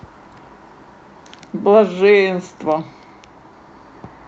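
No technical faults can be heard in the speech, whose content stops at 8 kHz, which fits a call's microphone processing followed by a wideband setting of a call codec such as Opus.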